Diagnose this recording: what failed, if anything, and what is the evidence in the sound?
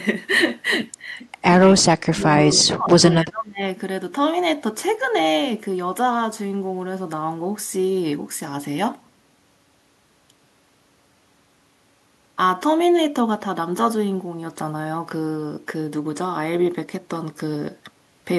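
The fault sits in call processing and sounds like speech suppressed in double talk. The speech dips at 1.75 to 1.83 s and 2.03 to 2.2 s, then again for most of 2.46 to 3.65 s. The dips are deep, around 20 to 25 dB. The likely cause is the echo canceller. It could not tell the near talker from loudspeaker echo while both sides spoke, so it turned the talker down too.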